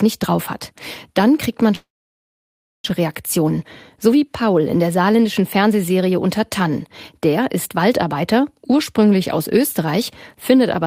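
Right after "kriegt man", at 1.75 s, the speech stops and does not return until 2.92 s. A brief trace of the last sound is carried on, then about 980 ms of silence follows, and about a second of speech is simply missing when it resumes. This is likely a long network dropout. On a spectrogram it shows as a short smeared tail and then an empty band across all frequencies, and on the waveform as a flat line.

Two jitter buffer speed-ups follow, from 3.00 to 3.51 s and from 3.98 to 4.50 s, the second ending just before "in der saarländischen". In each, the receiver, holding more audio than it wanted after the gap (roughly a tenth of a second extra), trimmed short pitch-period slices to catch up. That removed something like 40 ms and 50 ms respectively. Speech runs at 107% speed with unchanged pitch and sounds hurried. The spectrogram keeps harmonics at the same height but compressed in time, and the waveform shows slightly shortened syllables.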